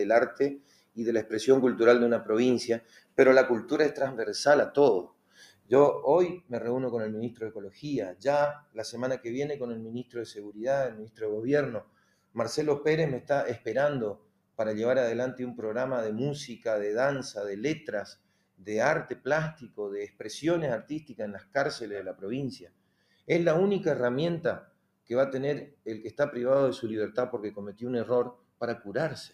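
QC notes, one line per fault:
throughout: noise suppressor applied to music or sounds. A suppressor tuned for speech stayed active on non-speech material and kept treating sustained tones, ambience and reverberant tails as noise to be removed. Its gain rose and fell by roughly 15 dB as it judged each moment, so the held parts of the sound are pulled down while onsets stand above them, and the level moves unevenly instead of following the material.
0.57–0.98 s, 2.8–3.18 s, 5.03–14.58 s, 17.79–23.29 s, 24.61–25.86 s, 27.72 s to the end: sound cut by the noise suppressor. In these spans the suppressor classed the sound as noise and attenuated it beyond the general treatment, by about 17 dB in the first span and about 18 dB at its deepest in the others. Steady and decaying portions sink or have their tails shortened. The total affected time is under half a second in each of the first two spans, a few seconds in each of the two long spans, under a second around 25 s, and the cut continues to the end of the clip.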